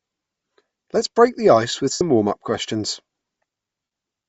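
From the start, the speech carries a breathy, grainy top end where upper frequencies are replaced by noise, likely Bluetooth LC3 compression at a low rate, around 32 kbps; the noise fill sets it apart from a simple dull low-pass. At 1.92 to 2.01 s, just after "break the ice with", lost LE Audio frames leave about 82 ms of noisy smear that fades away, and the same happens at 3.84 to 3.91 s for 75 ms. The decoder repeats the last spectrum with scrambled phase rather than falling silent or stuttering, which distinguishes this from plain dropouts or buffer repeats.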